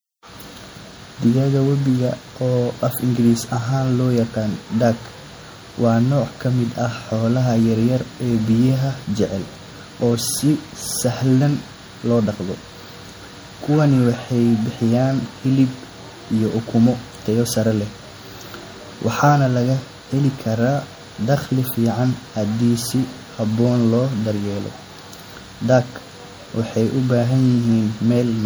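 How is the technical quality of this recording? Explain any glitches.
Throughout the speech there is a watery, swirling quality, with sibilants turning metallic and chirpy and consonant attacks smeared. The likely cause is MP3 compression at a low bitrate, around 64 kbps, where the encoder lets weak frequency components flicker on and off between frames.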